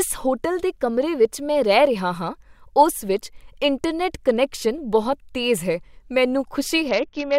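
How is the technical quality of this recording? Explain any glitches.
The speech holds up until right at the end, where there's a Bluetooth SBC bit pool drop from about 6.89 s to the close at 7.38 s. For that last half second the treble goes dull and a gritty grain creeps in. It sounds like the phone hit link congestion and slashed the SBC bit pool. The damage fits a drop from 28 to about 7, roughly 66 kbps. The top sub-bands get starved and the rest quantised coarsely, so it never recovers before the clip ends.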